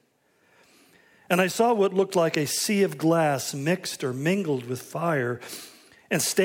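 No technical faults can be heard anywhere in the clip.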